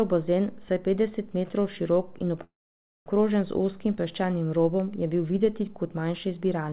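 At 2.44 s, after "petdeset metrov širok in", a call audio freeze holds the speech until 3.09 s. A short fading buzz gives way to 550 ms of flat waveform and a blank spectrogram. Delayed packets likely emptied the jitter buffer. Speech resumes intact, 620 ms late.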